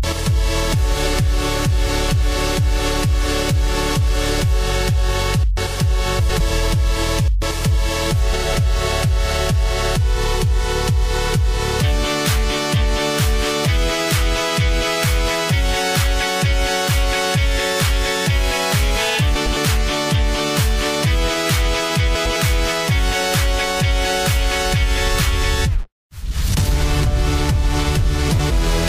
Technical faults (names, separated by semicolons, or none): frames out of order